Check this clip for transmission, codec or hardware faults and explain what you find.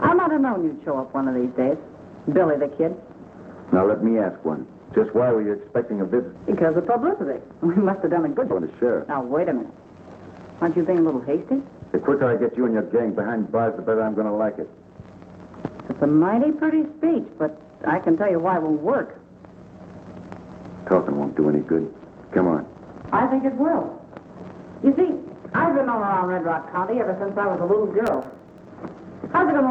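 Three kinds of fault are audible: a skip ahead, two bouts of jitter buffer speed-up, and a burst of processor overload crackle. The audio otherwise passes through an Opus call path at 32 kbps, with content above 8 kHz cut off.

At 6.35 s there is a skip ahead. Roughly a second of audio is discarded while later material is already queued, and the jitter buffer's delay drops by the same amount. Nothing fills the jump: the material before and after it is butted together almost directly, so the sound lurches forward abruptly, with no gap or concealment to mark the missing second.

Jitter buffer speed-up follows in two stretches. From 6.91 to 7.46 s playback runs at 108% of normal speed, and from 7.96 to 10.22 s at 120%. The buffer is holding more audio than its target, so the receiver repeatedly removes short pitch-period-sized pieces to reduce delay. The first stretch sheds only a few tens of milliseconds. 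The second removes about half a second, so the audio sounds noticeably hurried while its pitch stays unchanged.

From 28.07 to 28.65 s there is processor overload crackle. The audio thread misses its deadline on very small buffers, each well under a millisecond long, around twenty times in quick succession. Each missed buffer is output as silence, leaving a tiny hard-edged hole in the waveform. Strung together, these holes produce a gritty, tearing crackle over the sound that stops once the load clears.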